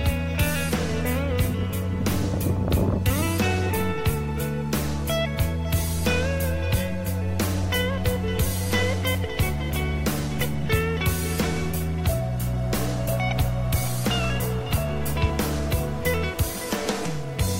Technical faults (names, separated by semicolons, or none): none